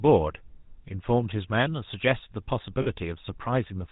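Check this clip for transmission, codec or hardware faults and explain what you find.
Two faults are present: GSM full-rate codec damage throughout, and a short burst of lost GSM frames.

GSM full-rate codec, throughout: the audio has been through the original GSM speech codec, and its sound fits the 13 kbps full-rate version. The codec models the vocal tract and drives that model with a sparse, regularly spaced pulse excitation that keeps only one sample in three. Nothing above 4 kHz survives. The speech sounds band-limited and dull, with a plainly audible buzzy, gravelly roughness layered over it.

Lost GSM frames, 2.82 to 2.87 s: over about 40 ms the decoder received bad frames, a gap that fits two 20 ms frames. It covered them by reusing the parameters of the last good frame. The speech does not drop out there. It briefly freezes into a rough, metallic ring, then the normal codec sound returns.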